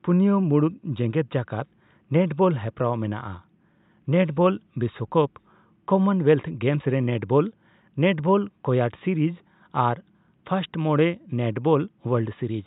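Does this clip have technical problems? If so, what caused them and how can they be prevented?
No, there are no technical problems to hear in this speech clip. The room's own background noise sits about 55 dB below the speech.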